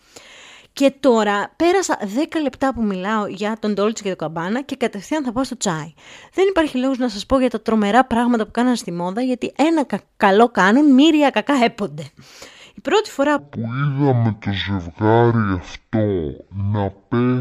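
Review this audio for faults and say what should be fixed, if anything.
From 13.39 s to the end at 17.41 s, right after "πρώτη φορά", there's a stereo-read-as-mono fault. Interleaved left and right samples get played back as one channel, so the speech drops to half speed and a full octave low. Fixing it means correctly de-interleaving that section. To prevent it, check the channel count in the file header and make sure the reader honours it before decoding.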